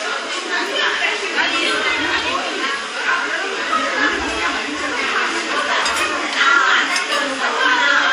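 Right through the clip there's a washy, ringing quality with a hiss that swells and fades along with the sound, and nothing above 13.6 kHz. That points to likely WMA compression at a low bitrate, around 48 kbps, with long transform blocks smearing the quantisation noise.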